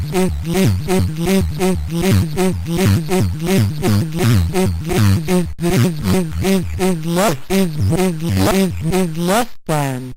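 No technical faults are audible in this recording.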